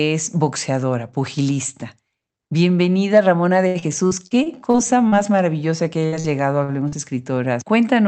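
From 3.67 to 5.15 s there is repeated packet loss with a robotic sound. Seven gaps, the longest 76 ms, are each filled by extending the preceding sound, covering about a fifth of that stretch and dropping about 200 ms of speech. The result is choppy. On a spectrogram, the harmonics flatten into frozen horizontal bands at each gap.

At 6.06 to 6.15 s, just before "llegado a", a burst of packet loss takes out about 40 ms of speech. The receiver holds the last sound for nearly 60 ms and fades it. In the waveform, the envelope tapers before the audio resumes slightly further along.

Short concealed packet loss follows at 6.20 to 6.27 s, also just before "llegado a", and again at 6.88 to 6.95 s. Each time, roughly 40 ms is lost and replaced with an extrapolation of the preceding pitch or noise. This gives a quick smear or wobble. On a spectrogram, each shows up as a short blurred patch where the fine harmonic detail briefly goes soft.

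At 6.64 to 6.71 s, right after "llegado a", there is a short stall from a late packet. The jitter buffer ran dry, so the last sound was stretched by about 43 ms until the packet arrived. Nothing is missing, but one sound lingers a bit too long. It appears as a stretched, static segment in the spectrogram.

Across the clip, the Opus call path's roughly 8 kHz bandwidth is visible as an empty band above that line on the spectrogram. That bandwidth fits a moderate bitrate of around 32 kbps.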